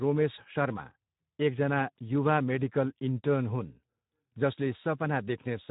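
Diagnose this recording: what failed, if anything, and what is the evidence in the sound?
The codec stage failed: the speech was squeezed through the Speex codec at a low setting, consistent with roughly 11 kbps. Throughout, the CELP excitation is starved of bits, leaving the speech audibly hoarse and noisy, with nothing above 3.8 kHz.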